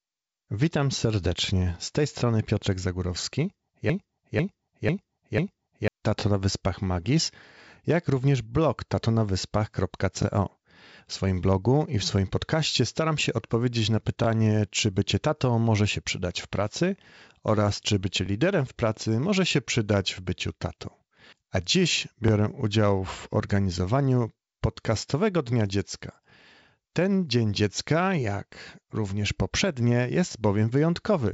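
Speech, sent through G.722 wideband telephone coding at 56 kbit/s, so it stops around 7.7 kHz with a faint hiss on top. There are two real problems. From 3.90 to 5.88 s there's a broken-record loop: a roughly 0.50 s fragment repeats four times back to back, most likely because the player or stream stalled, and whatever should have played there is gone. Then there are overlapping chunks: each 4 s chunk starts 20 ms before the previous one ends, so you get a tiny stutter at 6.20, 10.22, 14.24, 18.26 and 22.28 s. The 14.24 s one falls between "staram się odpowiedzieć na" and "czy bycie tatą może", and the 18.26 s one between "pracy oraz czy bycie" and "liderem w pracy może".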